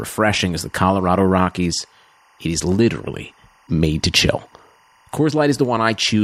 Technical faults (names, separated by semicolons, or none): timecode bleed